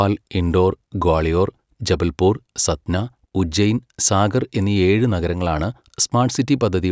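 Nothing in the speech stands out as a technical fault; it just runs along without any glitch calling attention to itself.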